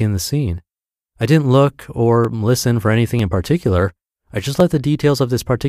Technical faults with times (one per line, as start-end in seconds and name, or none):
1.22 dropped samples
2.25 dropped samples
3.19 dropped samples
4.60 dropped samples